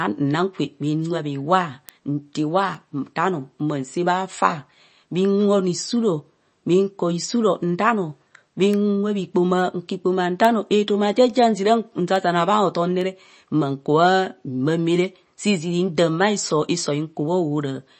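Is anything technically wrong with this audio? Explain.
Yes, there are two faults.

Throughout the speech, nothing is heard above 8.3 kHz and the sound is watery and swirly. This is likely MP3 compression at a low bitrate, around 32 kbps. Short of bits, the encoder cut the treble and switched weak frequency lines on and off between frames.

From 0.17 s to 17.28 s there are word clock ticks, about twenty of them, roughly once per second. The receiving device runs on its own clock, off by around 20 parts per million. Each slip drops or repeats one sample, causing a sharp tick.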